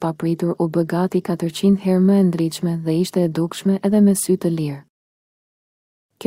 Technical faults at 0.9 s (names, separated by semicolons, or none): none